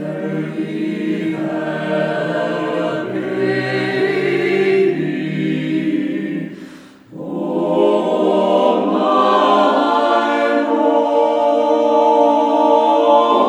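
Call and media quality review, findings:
No findings in this call and media quality review; nothing in the audio calls for a ticket.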